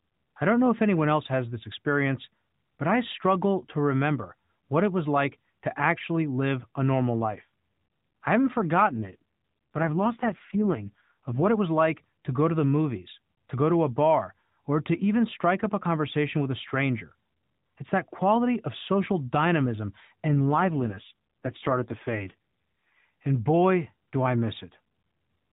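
It's a speech clip over a narrowband mobile link. There are two AMR rate drops, 8.88–11.48 s and 20.28–22.98 s, where the voice turns rougher and more synthetic without any gap, which fits the codec stepping down from about 12.2 to 4.75 kbps.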